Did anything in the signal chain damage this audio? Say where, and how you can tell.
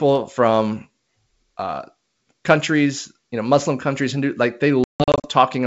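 Yes: network packet loss on an ADPCM call, 4.84–5.28 s: 280 ms of silent holes, longest 160 ms, then decoder's predictor restarts out of step.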